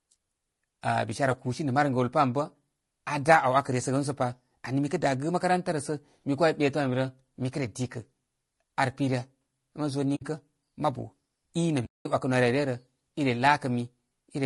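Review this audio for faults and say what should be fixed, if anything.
Throughout the speech the voice sounds rough and grainy, with a hiss-like fill between the harmonics and a top band that sounds thin and synthetic rather than natural. The likely cause is low-delay AAC compression of the AAC-ELD kind used for calls: its short frames resolve pitch harmonics poorly and spend bits inefficiently, and the damage here fits a bitrate around 32 kbps. Prevent it by encoding at a higher bitrate or with a longer-frame codec where low delay isn't needed.

The audio fades out and back in, leaving soft-edged holes, from 10.15 to 10.22 s just before "mabu i", and again for about 0.2 s from 11.85 to 12.06 s. This is AAC frame loss with muting: the decoder zeroed the missing frames' spectrum, and the overlapping windows smoothed the edges. The gap lengths point to about three frames lost in the first hole and ten in the second. 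Prevent it with forward error correction or packet-loss concealment on the transport path.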